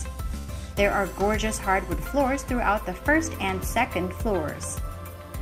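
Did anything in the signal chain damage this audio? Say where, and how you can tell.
Yes. The network stage damaged it: a burst of packet loss runs from 0.37 to 0.50 s. For roughly 107 ms the receiver's concealment stretches out the last sound it had and turns it down as the gap goes on, which leaves a held buzz or fading hiss where fresh signal should be. When playback picks up again at 0.50 s, about 100 ms of the original audio has been skipped, so the sound jumps ahead rather than continuing.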